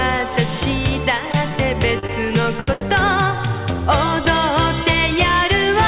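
Between 1.99 and 2.83 s the audio shows repeated stalls (stutter): five times the jitter buffer ran dry and the receiver stretched the last sound, for about 224 ms in total, nothing lost, longest gap 77 ms. It all sits on top of a telephone-band call path with nothing above 4 kHz, which fits G.711 mu-law.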